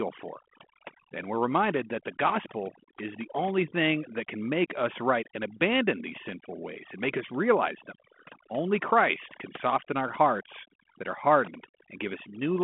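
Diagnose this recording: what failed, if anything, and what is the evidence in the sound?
Overdone noise removal in the call processing, present throughout. Pauses sink to near silence dotted with twinkling specks. The suppressor is cutting individual frequency bands it judges to be noise, and quiet speech detail goes with them.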